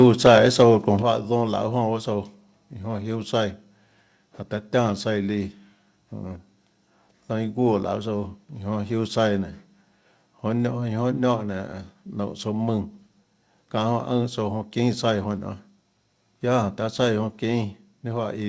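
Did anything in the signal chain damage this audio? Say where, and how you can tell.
Yes. Microphone overload at the converter, 0.02 to 0.35 s: the loudest speech peaks are flat-topped and crackle, likely from input gain driving them about 3 dB past full scale.

Microphone volume stepped down at 1.02 s: voice and background fall together by about 7 dB in one step, likely call-processing gain control reacting to that opening overload.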